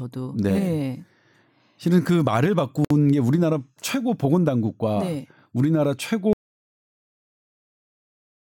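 Speech recording with a gap at a join of encoded pieces at 2.85 s: about 59 ms of silence, left where separately encoded segments were spliced without trimming their start delay and end padding. From 6.33 s to the end, an audio dropout to silence leaves silence with no room tone, likely from the input signal being lost.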